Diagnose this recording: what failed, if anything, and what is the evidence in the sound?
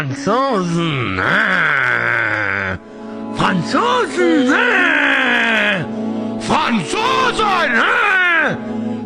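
Nothing failed here, as far as I can hear: no stage in the chain, from the wiring through to playback, leaves any mark on the sound.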